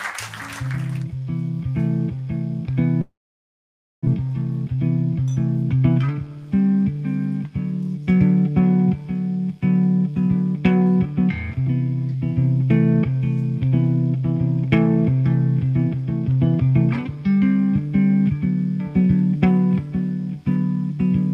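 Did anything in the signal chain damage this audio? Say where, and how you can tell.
Yes. From 3.01 s the sound carries on as a smeared buzz that fades over about a tenth of a second, then drops to near silence for roughly 0.9 s. It resumes at 4.18 s with about 1 s of material simply gone. This is likely a long network dropout: packets stopped arriving, the receiver's concealment stretched the last received sound until it decayed, then filled the rest with silence, and playback picked up later without the lost stretch.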